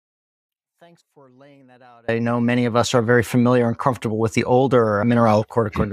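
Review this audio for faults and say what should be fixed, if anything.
An audio dropout to a faint residue runs from the start to 2.09 s. The speech is already gone when the clip begins. Only a faint sound remains, about 35 dB down. Then the speech returns abruptly. The likely cause is a lost feed into a live path.

Secure cables and connections, and confirm a steady input level before recording starts.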